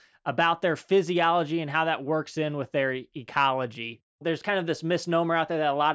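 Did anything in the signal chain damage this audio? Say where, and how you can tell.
No, nothing in this speech recording stood out as damaged on listening.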